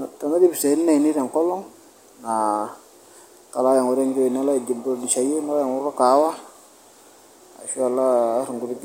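Listening closely to the speech in the recording, nothing stood out as a technical problem at any point.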